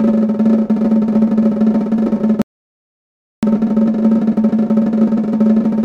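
A rebuffering stall halts this music at 2.42 s, leaving silence until 3.43 s while the player waits for data, then resumes exactly where it stopped, adding about 1.01 s.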